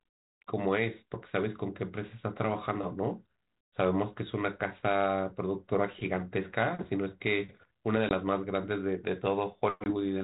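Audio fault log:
8.09–8.12 s and 9.84–9.91 s, packet loss on an ADPCM call: a couple of packets drop out, leaving about 20 ms of hard-edged silence in the 32 kbit/s G.726 stream. The decoder's predictor and step size lose sync with the sender, so speech returns slightly distorted, then settles within tens of milliseconds.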